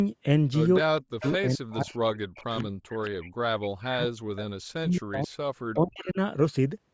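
From 0.79 to 3.01 s, 3.58 to 5.31 s and 5.74 to 6.18 s, the speech dips by up to about 40 dB and breaks up. This is likely speech suppressed in double talk, with the canceller muting the talker during overlap. Echo leak appears at 1.21, 2.35, 2.6, 3.04 and 5.33 s. It is a copy delayed 221 ms, about 15 to 35 dB down, likely uncancelled loudspeaker pickup.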